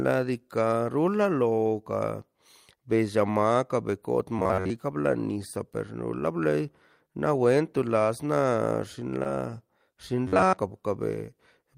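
From 4.39 to 4.70 s, audio is likely arriving too seldom and the last stretch of roughly 11 ms is replayed over and over while most of the real signal is skipped. That repetition stamps a fixed pitch of about 93.8 Hz onto the speech, turning it into a stiff, metallic buzz that only loosely tracks the talker: robotic sound from repeated short buffers. The same thing happens again from 10.27 to 10.58 s, with the same 93.8 Hz drone and the same rough, mechanical quality.

Between those two, from 9.23 to 9.27 s, there is a short concealed packet loss. About 20 ms of the call never reached the decoder in time, and the receiver covered roughly 15 ms of that gap by extending the preceding sound before fading back into the real audio. The result is a brief smear or wobble in the speech at that point.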